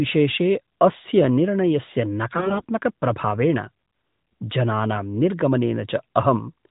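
A speech clip carried over the AMR narrowband mobile codec, with nothing above 4 kHz and only light coding roughness, which fits its 12.2 kbps mode. From 2.34 to 2.65 s, right after "अस्य निर्णयस्य", AMR bit errors hit. The voice keeps roughly its pitch and loudness but turns hoarse, scratchy and gargly. The flipped bits misplace the excitation pulses and corrupt the fine pitch, gain and spectral values, which fits 17 damaged 20 ms frames with a heavy error rate. Lost packets would sound different, leaving gaps, repeats or a smeared fade rather than a continuous, distorted voice.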